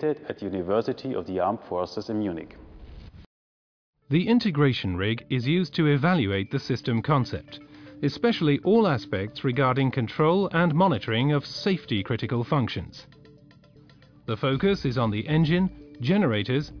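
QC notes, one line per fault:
No audible faults found.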